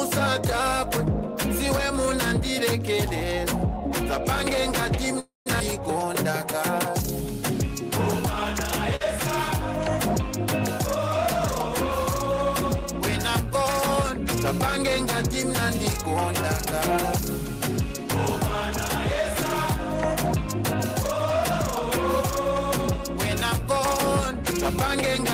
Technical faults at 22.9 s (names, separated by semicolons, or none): none